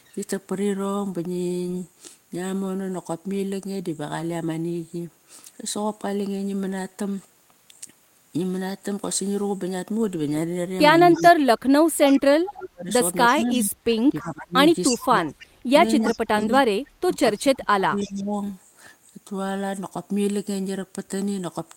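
Delayed repeats of the speech surface in short scraps at 11.14, 12.06, 13.28, 15.28, 16.05 and 17.99 s, each trailing the original by 326 ms and sitting well below it, from roughly 10 to 30 dB down. This echo leak is likely from a far-end loudspeaker whose echo canceller let some of its microphone pickup return. From 11.14 to 15.25 s and 16.01 to 18.37 s the speech dips and drops out in pieces, by as much as around 30 dB, likely speech suppressed in double talk as the canceller turned down both its own talker and the loudspeaker echo.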